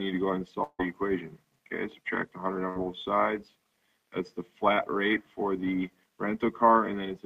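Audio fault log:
0.63–0.81 s, long network dropout: audio likely stopped arriving for about 160 ms, so the last sound is held as a fading buzz or hiss, then 40 ms of near-silence before it resumes further on.
2.69–2.77 s, burst of packet loss: about 60 ms of packets were lost, and the receiver stretched the preceding sound into a briefly fading fill, skipping that stretch of audio.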